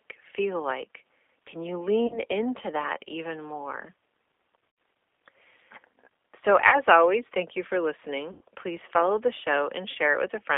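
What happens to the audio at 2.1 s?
Around 2.07 to 2.2 s, just before "into that even more", there's VoIP packet loss concealed by the speech codec. About 30 ms of sound went missing, which fits a single lost packet. The decoder filled it by stretching its last pitch and filter into a fading smear, and the sound stays weak for a bit after the gap. Underneath, the G.729 codec keeps things band-limited to 300 Hz to 3.5 kHz at 8 kbit/s, with that plainly rough, synthetic edge.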